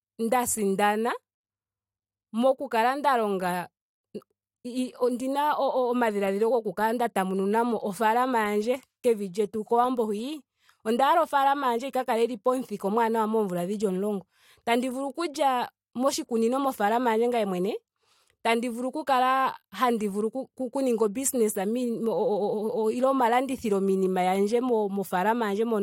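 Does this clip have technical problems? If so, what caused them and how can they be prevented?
No, nothing stood out as a technical problem on listening to this speech clip.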